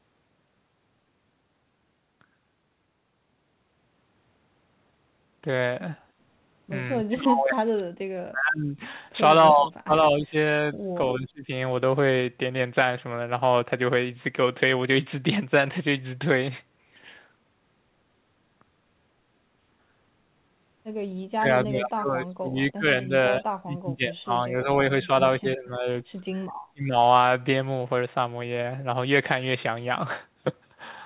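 Around 7.03 to 8.77 s the talker drops hard, by roughly 40 dB at worst, then dips again at 9.52 to 10.34 s and 11.18 to 11.51 s. A second cluster runs from 21.36 to 24.69 s, then short bites at 25.04 to 25.09, 25.4 to 25.87, 26.26 to 26.31 and 26.68 to 26.95 s. It's likely speech suppressed in double talk: the echo canceller couldn't tell this talker from far-end echo and ducked both, chopping the already 4 kHz-limited call audio into pieces.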